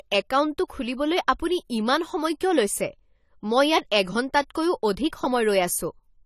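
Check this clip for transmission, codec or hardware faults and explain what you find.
There is one fault, present throughout the speech: AAC compression is the likely cause. Nothing is heard above 14.1 kHz, and the damage is plainly audible, pointing to AAC-LC at around 32 kbps. Coarse quantisation of the frequency lines leaves a dull, smeared, fizzy sibilance.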